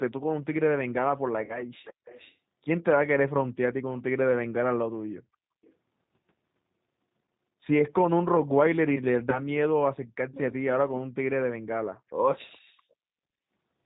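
Speech carried over a G.729 call link, and the codec is plainly audible throughout. At 8 kbit/s the decoder rebuilds each 10 ms frame from a vocal tract filter, a pitch predictor and a few pulses, so nothing above 4 kHz survives and the voice sounds rough and faintly synthetic. It is not just a narrow filter or plain low-bitrate MP3 smearing, because the coarseness follows the pitch pulses rather than showing up as swirling highs.

VoIP packet loss concealed by the speech codec occurs twice. From 1.45 to 1.62 s, about 40 ms of audio is missing, which fits two 20 ms packets. From 9.30 to 9.40 s, 20 ms is missing, which points to a single packet. In each gap the decoder stretches its last pitch and filter into a buzzy tone or coloured noise that fades, and the voice stays weak for a moment after audio returns. A hard dropout would leave silence or a click, but here the gap is filled with this extrapolated sound.

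An echo leak shows up at 1.84 to 2.36 s and again at 12.39 to 12.58 s. A delayed copy of the voice trails the original by 420 ms. It sits around 20 dB below the speech the first time and fainter still the second. The likely cause is a far-end loudspeaker whose echo canceller let some of its own output back into the microphone. Room reverberation would smear continuously, whereas this is a distinct, delayed repeat.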